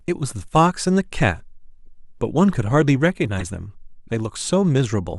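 At 1.83 to 1.87 s, a corrupt frame decoded leaves a faint glitch. Damaged bits in a couple of compressed frames were played anyway, so misread gains put energy in the wrong bands for about 40 ms. At 3.39 to 3.42 s the same fault returns far louder, peaking near -10 dBFS, as a short glitch of misplaced sound. A spectrogram shows a short vertical patch of misplaced energy, and the waveform shows a brief spike.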